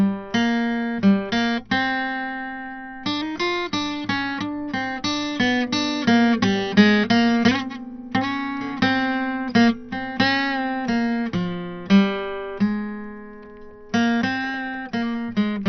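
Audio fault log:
throughout: MP2 compression, likely at a very low bitrate near 48 kbps; music is dull with nothing above 6.1 kHz, upper sub-bands switched off, and gurgling quantisation grain.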